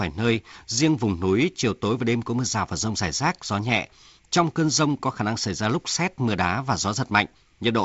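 Nothing goes wrong anywhere in this speech: it simply carries the sound of G.722 wideband telephone coding, with nothing above about 7.7 kHz and the slightly grainier lower band that points to the 48 kbit/s mode.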